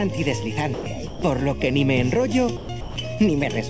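The sound passes through a call path whose band stops at 8 kHz, consistent with a G.722 wideband codec. Throughout, it has a hollow, phasey colour from channel delay (comb filtering). One channel runs less than half a millisecond behind the other. When the two are summed to mono, they cancel at evenly spaced frequencies. The first notch falls around 1.5 kHz, with further fixed notches above it. The sound also drops out four times and is replaced by steady noise. This happens at 0.74 to 0.86 s, 1.07 to 1.22 s, 2.57 to 2.69 s and 2.81 to 2.96 s. The gaps last 120 or 150 ms each. The likely cause is sound dropped by the voice detector. It mistook part of the signal for background and stopped sending, so the receiver filled the gaps with comfort noise until sending resumed.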